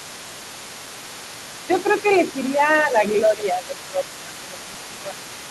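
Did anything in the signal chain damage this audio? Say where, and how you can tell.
Yes. Throughout the clip, from 0 to about 5.5 s, a second, fainter voice sits behind the main talker, roughly 20 dB down. This is the other side's voice leaking through, and the fault lies in call processing. The likely cause is an echo canceller that left part of the far end's loudspeaker playback in the microphone signal, so that residue runs under the whole recording.

The main speech also ducks in four places: 1.67 to 2.05 s, 2.45 to 2.62 s, 2.84 to 4.04 s, and 4.25 to 5.3 s. The dips go to roughly 10 dB, except the 2.45 s one, which is shallower at about 5 dB. In the two longer spans, much of the stretch is pulled down. This is speech suppressed in double talk, again in call processing. The likely cause is the echo canceller failing to separate the talker from the loudspeaker echo while both were active and attenuating everything.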